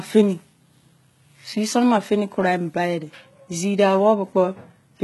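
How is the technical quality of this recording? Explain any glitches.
The recording has audible coding damage across the whole clip. HE-AAC compression is the likely cause, and it is heavy. The codec appears to have sent only the lower spectrum in detail and rebuilt the upper range by copying lower bands upward under a coarse envelope, consistent with a very low bitrate around 16 kbps. Because the rebuilt treble is not the real one, its harmonics fail to line up with those below. Sibilants in the speech come out gritty and metallic, and nothing is present above 11.8 kHz.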